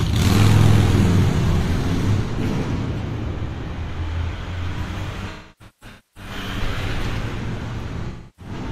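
From 5.30 to 6.31 s there is AAC frame loss with concealment. About 725 ms of frames go missing in scattered runs, the longest around 300 ms. The decoder rebuilds each gap from the last good spectrum, leaving smeared, noisy, phasey patches. The same happens again from 8.07 to 8.53 s, with about 0.3 s concealed.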